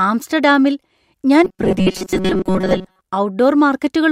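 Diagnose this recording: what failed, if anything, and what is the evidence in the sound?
Driver or buffer stage: robotic sound from repeated short buffers at 1.44–3.01 s, after "ആംസ്റ്റർഡാമിൽ ഞാൻ". A rigid 188 Hz buzz replaces most of the audio, likely from underruns looping a 5.3 ms block.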